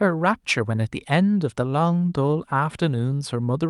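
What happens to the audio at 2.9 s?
Nothing goes wrong at 2.9 s; the speech runs on intact through that moment with no dropout, click or distortion.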